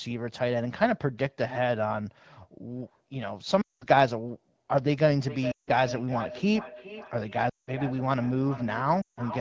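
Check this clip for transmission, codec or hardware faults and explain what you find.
Two faults are present: lost AMR speech frames and feedback echo between two devices.

Lost AMR speech frames occur at 3.61–3.86 s, 5.51–5.70 s, 7.49–7.70 s and 9.01–9.20 s, each gap lasting about 0.16 to 0.2 s. Frames failed their checksum, so the AMR-WB decoder repeated the last good pitch and vocal tract settings at falling gain. The sound drops to near silence within two frames, then returns weak or rough.

Feedback echo between two devices runs from 5.22 s to the end. One device in the same room plays what the other's microphone sent, and that microphone picks it up again. Each fragment returns around 0.4 s later, thinner and more ringing, peaking at about 11 dB below the main speech.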